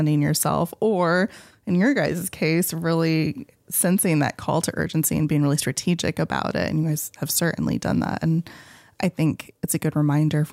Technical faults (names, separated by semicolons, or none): none